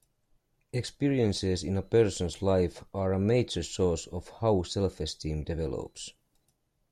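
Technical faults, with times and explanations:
No technical faults are audible anywhere in this recording.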